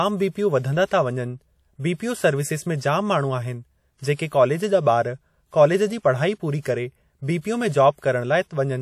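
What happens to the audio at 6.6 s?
From 6.61 to 6.65 s there is pre-echo: a short hiss about 48 ms long runs just ahead of the attack on "करे बीपीओ में", which then sounds soft and smeared. A transform codec spreads quantisation noise across its whole block, so the noise sized for that loud onset also fills the quiet gap before it. On a spectrogram this shows as a thin broadband haze leading the onset; on the waveform, low-level fuzz before the transient.

That pre-echo sits within plainly audible WMA compression. The ringing, washy texture and the hiss that breathes with the signal likely come from a WMA encoder at a low bitrate, roughly what 48 kbps would give. A spectrogram shows a smeared, blocky look with weak components missing.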